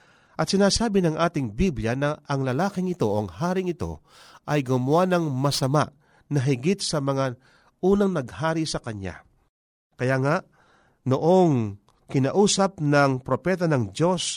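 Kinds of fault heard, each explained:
Crude rate conversion: From 2.48 to 5.76 s, just before "na higit", the speech gains a gritty, inharmonic fizz. Samples were repeated instead of filtered, which fits a 44.1 kHz to 48 kHz change. The patterned error sits roughly 30 dB down.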